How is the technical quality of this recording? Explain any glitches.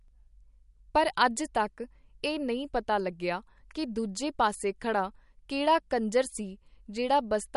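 The quality is mediocre: audible codec damage runs the whole way through. The speech has a watery, swirly texture, and nothing survives above 11.2 kHz. That's likely MP3 compression, and a low bitrate around 48 kbps would fit. Short of bits, the encoder chops the treble and drops weak frequency lines that flicker between frames. So the s sounds get metallic and consonant attacks smear.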